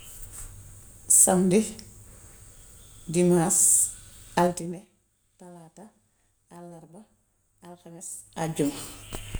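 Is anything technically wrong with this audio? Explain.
Yes. From 4.44 to 4.88 s a fast ticking rides on the speech as it falls roughly 20 dB. This is zipper noise, caused by unsmoothed gain steps of about 3 dB, some fifteen per second.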